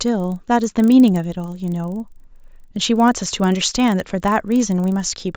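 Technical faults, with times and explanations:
Throughout, resampler restarted on every block: independently resampled 40 ms blocks leave edge errors, a 25 Hz buzz during speech, shown as vertical spectrogram lines.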